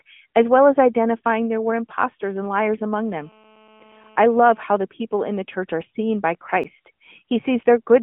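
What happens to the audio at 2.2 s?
GSM signalling bursts are heard from 1.43 to 2.94 s. A nearby 2G phone's radio bursts get rectified, making faint galloping 217 Hz buzzes well below the speech.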